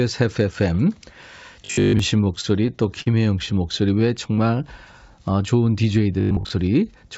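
From 1.65 to 1.99 s the speech turns into a rigid, metallic buzz. This is robotic sound from repeated short buffers. The buzz sits at 50 Hz, which fits a 20 ms block being replayed. Most of the stretch is repeats, not new audio. The likely cause is new audio arriving too seldom, so the software kept looping the last block. The sound still follows the speech roughly.

From 2.41 to 3.09 s come repeated stalls (stutter). The jitter buffer ran empty five times. Each time the receiver stretched the last sound until packets caught up. In all, 93 ms was filled in this way, and the longest wait was 40 ms. Nothing is lost. The speech drags and catches, with about 14% of the span patched.

From 3.99 to 4.56 s there is a jitter buffer slow-down. The receiver built up a reserve by repeating single pitch periods and bits of pause. This added 62 ms, so the speech plays at 90% speed. The pitch stays the same. 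Sounds are drawn out.

From 6.21 to 6.51 s the robotic sound from repeated short buffers returns. The 50 Hz buzz is the same and again most of the audio is looped. Throughout the clip the call codec passes nothing above 8 kHz, which fits G.722.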